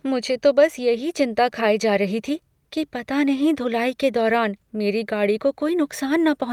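A short bit of speech, and nothing in it stands out as a technical problem at any point.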